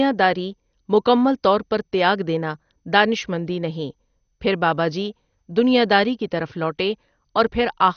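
Throughout the speech the sound is dull, with nothing above 6.4 kHz, and a gurgling, granular roughness. This is likely MP2 compression: starved upper sub-bands are switched off and the rest coarsely quantised, which fits a rate near 48 kbps.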